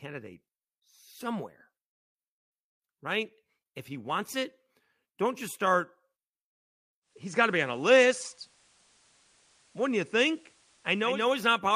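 At 7.01 s the speech slips into a digital radio blending to analogue: the receiver lost its digital stream and cross-faded over about 330 ms to the station's FM broadcast. You hear a faint hiss come up, somewhere around 35 dB under the signal. The level shifts by about 1 dB. At 11.29 s it blends back to digital.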